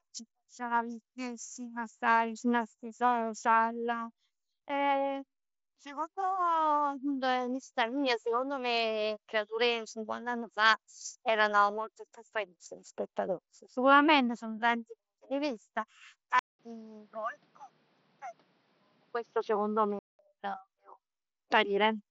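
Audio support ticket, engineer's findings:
16.39–20.19 s: audio narrows and dulls abruptly. Likely input switched to a poorer device. Waveform shows a 200 ms flat gap at 16.39 s, with little level change either side. On the spectrogram, the top edge drops from about 7.7 kHz (mSBC headset path) to a hard ceiling at 6.2 kHz. A new noise floor sits roughly 40 dB under signal.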